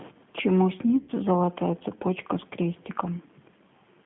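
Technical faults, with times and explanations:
Throughout, G.729 codec: The speech passes through a low-rate CELP voice codec whose damage is plainly audible, consistent with G.729 at 8 kbit/s. The line is band-limited to roughly 150 Hz to 3.5 kHz, so the low body and all the upper air are gone. Because the decoder rebuilds each short frame from a vocal-tract filter, a pitch estimate and a handful of pulses instead of the actual waveform, the speech comes out slightly gritty and artificial.
1.02 to 1.11 s, VoIP packet loss concealed by the speech codec: About 60 ms of audio went missing in transit, which fits six consecutive 10 ms frames. Rather than dropping to silence, the decoder kept synthesising from its last known pitch and filter settings while turning the level down, so the sound smears into a fading buzzy or hissy drone. Since each decoded frame depends on the previous one, the speech stays thin and distorted for a short stretch after 1.11 s.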